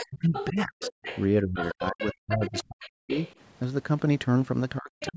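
A second voice sits faintly under the speech from 0.0 to 0.5 s, again from 0.81 to 1.22 s and from 1.56 to 3.33 s, about 10 dB below the talker, and briefly at 5.0 s, fainter still. This is the other side's voice leaking through, likely loudspeaker echo the canceller failed to remove. Overlapping this, the talker's own voice sinks by as much as about 40 dB in pieces, from 0.03 to 0.82 s, 1.43 to 3.11 s and 4.8 s to the end. That is speech suppressed in double talk, likely with the canceller turning down both voices together while both sides talk.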